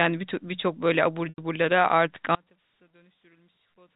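At 1.29 s the speech breaks up. This is packet loss with pitch repetition. About 90 ms of audio went missing, up to 1.38 s. That fits roughly nine 10 ms packets. The receiver filled the gap by repeating the last pitch period. That held a buzzy tone for a moment. The gap outlasts the fade, so the tone dies into a short silence. Speech then returns with a brief cross-fade.

From 2.35 s to the end, the level collapses by about 31 dB. The speech nearly disappears. What remains is faint. The likely cause is one channel inverted. With one stereo side flipped in polarity, the shared centre content cancels when the channels are summed to mono. Only the small difference between them survives.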